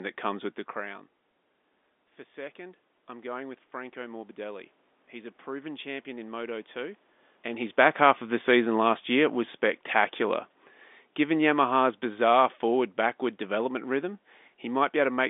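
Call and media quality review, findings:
Automatic gain rising, 2.17–7.04 s. Input level drops by about 15 dB after the talker moves back early on. The AGC compensates slowly, adding about 6 dB over nearly five seconds. Voice and room noise swell together. Component: capture-side AGC, slow release.

Automatic gain falling, 7.69–10.51 s. The talker moves around 7 s, and the AGC finds the input too loud. The AGC pulls gain down by about 3 dB over roughly three seconds. Speech and background sink together. Component: AGC attack behaviour, lagging the level change.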